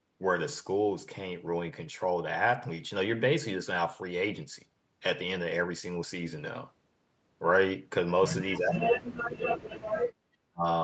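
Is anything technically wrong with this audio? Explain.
Yes. From 8.58 to 9.84 s, and again briefly from 10.47 to 10.65 s, the speech dips sharply, by some 40 dB at its deepest. The likely cause is speech suppressed in double talk: the echo canceller, hearing both ends at once, mistook the talker for loudspeaker echo and pulled them down.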